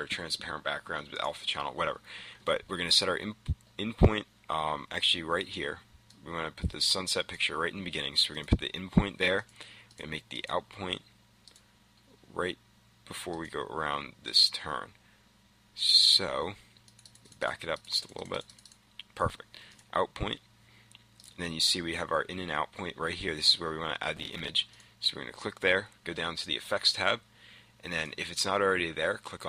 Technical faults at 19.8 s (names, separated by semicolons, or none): processor overload crackle